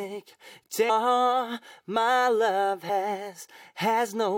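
Damaged data in a compressed stream, at 0.88 s and again at 2.88 s: corrupted bytes make the decoder misread those frames and lose sync until it finds the next frame header, giving a brief, harsh blip each time, under 20 ms long.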